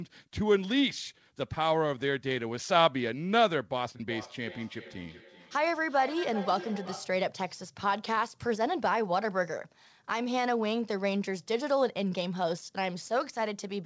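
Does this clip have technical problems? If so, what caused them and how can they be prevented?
Yes: from 4.09 to 7.25 s there's feedback echo between two devices. One plays the other's mic back into the room, so the sound returns roughly every 0.4 s, peaking about 13 dB below the speech. Keep only one device's audio live per room, or use headphones.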